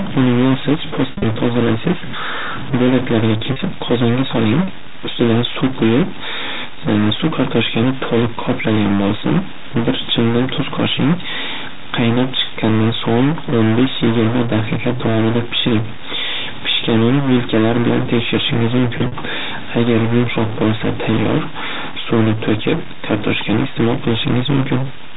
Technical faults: stuck bit; packet loss with pitch repetition

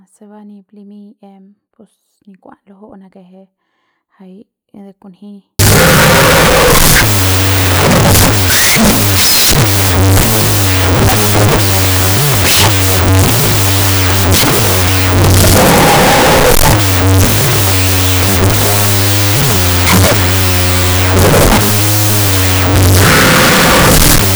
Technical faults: wrong sample width

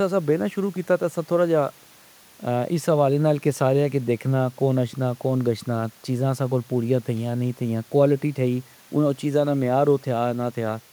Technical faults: none

